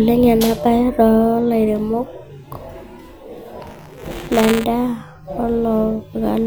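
From 3.67 to 4.64 s there's buffer tearing: writer and reader cross each 5 ms period, splicing in a sliver of stale audio, giving a rattly 200 Hz buzz.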